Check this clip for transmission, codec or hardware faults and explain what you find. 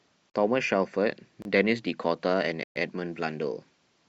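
Three blocks of digital silence interrupt the speech, at 0.30, 1.42 and 2.63 s, lasting about 43, 29 and 128 ms. The output briefly received zeros instead of samples, the first fitting a 2048-sample buffer. Each cuts abruptly, the last a clear hole. Waveforms show flat lines; spectrograms show vertical gaps.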